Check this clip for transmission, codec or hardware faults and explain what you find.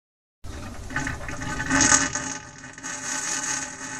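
One fault is present: zipper noise from 1.67 to 2.42 s. Here a level cut of roughly 25 dB is carried out in fixed increments of 3 dB, about ten of them per second, with no smoothing between one gain value and the next. Each jump leaves a tiny discontinuity in the waveform, so the sound dips with an audible ticking or zipping laid over it.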